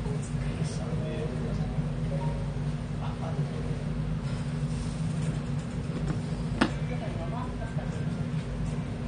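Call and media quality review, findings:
AAC compression, throughout: nothing above 9.7 kHz, dull smeared sound with warbling texture; likely AAC-LC encoder starved of bits, consistent with roughly 32 kbps.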